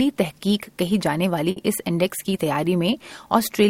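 A short stall from a late packet occurs between 1.51 and 1.59 s. A packet arrived after its playout time, the jitter buffer ran dry, and the receiver filled the gap by stretching the preceding sound for about 50 ms, producing a held sustain with a slight buzz or dip. Playback then resumed exactly where it stopped, so no audio is lost, but everything after 1.59 s plays 50 ms later than before.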